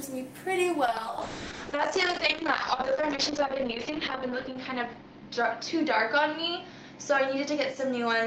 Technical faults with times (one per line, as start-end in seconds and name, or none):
0.86-8.26 call bitrate drop